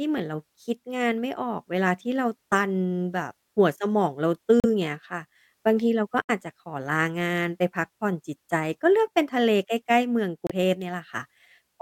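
The speech drops out three times. At 4.60 to 4.66 s there is about 39 ms of silence. At 6.22 to 6.30 s the gap is about 71 ms. At 10.47 to 10.51 s it lasts about 29 ms. Each cut is abrupt, and then the speech carries on. These are most likely Bluetooth stalls. Interference delayed the wireless packets, so the headphone buffer emptied. Playback halted until the resent data arrived.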